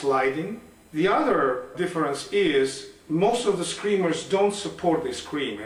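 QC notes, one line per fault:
throughout, USB whine: the USB bus's 1 ms frame current leaks through power or ground, adding a fixed 1 kHz whine with harmonics strongest near 10 kHz, about 40 dB below the sound.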